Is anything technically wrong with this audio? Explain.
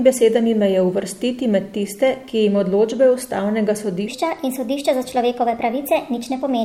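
Yes. From 4.08 s to the end of the clip, a section plays at the wrong speed, running 1.23 times faster than it was recorded. The likely cause is that this stretch was played or edited against the wrong clock. The speech becomes hurried and high, rising about four semitones, with a sudden jump at the switch. Pitch and tempo shift together and by the same ratio, which sets this apart from a pure pitch shift or a time-stretch, where only one of them changes.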